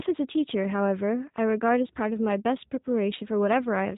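From start to finish, the speech carries G.729 codec damage, likely the G.729A variant. Each frame is rebuilt from a vocal tract filter, pitch prediction and a few pulses, at a rate that fits 8 kbit/s. The speech sounds rough and synthetic. Nothing passes above 3.8 kHz.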